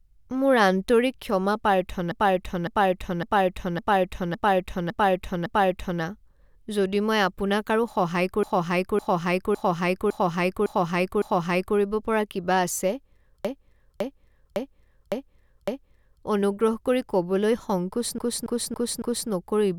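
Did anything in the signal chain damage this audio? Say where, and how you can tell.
Yes. Repeated frames at the codec or storage stage. A 0.56 s stretch of speech replays identically from 2.12 to 6.02 s, 8.43 to 11.77 s and 13.45 to 16.23 s, and a 0.28 s stretch from 18.18 to 19.30 s. Waveform and spectrogram show copied tiles.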